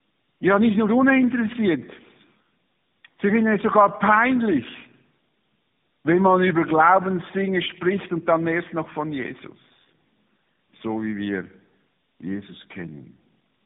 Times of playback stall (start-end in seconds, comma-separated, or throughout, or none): none